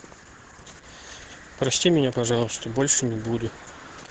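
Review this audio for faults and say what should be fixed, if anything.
Opus voice compression runs throughout: the speech is cut off near 8 kHz and sounds muffled, hoarse and slightly robotic. This fits the SILK linear-prediction coder at a low bitrate of around 10 kbps, where the excitation is coded too coarsely to keep natural texture. Encoding at a higher Opus bitrate, or using a less lossy format, would prevent it.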